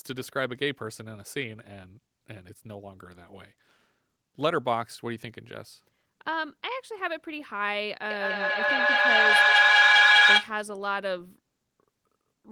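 A speech recording in which a feedback howl takes over from 8.1 s to 10.64 s. A microphone and loudspeaker in the same room are feeding each other, so each pass round the loop comes back louder, narrowing to a tone of roughly 1.5 kHz that peaks about 12 dB above the speech, with the loop repeating around every fifth of a second. A spectrogram shows a bright horizontal line near 1.5 kHz, and the waveform swells into a dense block.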